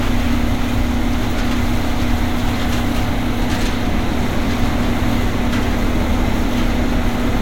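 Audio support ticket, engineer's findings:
Engineer's findings: no fault found in this sound recording; nothing to escalate on this audio support ticket.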